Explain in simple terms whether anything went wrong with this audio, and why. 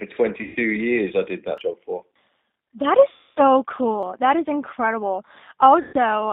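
Throughout, the voice sounds thin, muffled and slightly rough, as if over an old phone line. That is the G.729 codec, which rebuilds speech from a simplified model and keeps only roughly 150 Hz to 3.7 kHz.

At 0.43 to 0.57 s, just before "years I did", 3.09 to 3.41 s, and 5.81 to 5.94 s, the sound smears into a fading buzz or hiss. This is VoIP packet loss concealed by the speech codec: about 120, 270 and 120 ms went missing, and the decoder guessed to fill the holes.

At 1.58 s, between "years I did" and "job for", and again at 4.03 s, the audio jumps ahead, losing about a twentieth of a second. That is audio missing between chunks, likely dropped while the recorder switched between 2.5 s pieces.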